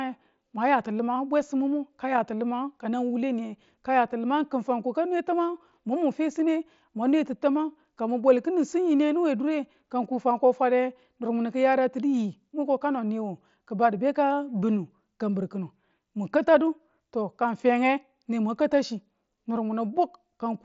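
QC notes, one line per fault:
No faults found; speech is carried over the Bluetooth mSBC headset codec, with content reaching up to about 7.7 kHz as that link allows.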